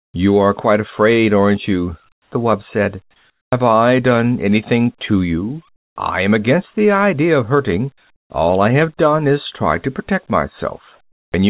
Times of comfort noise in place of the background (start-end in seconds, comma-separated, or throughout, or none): 2.12-2.32, 3.30-3.52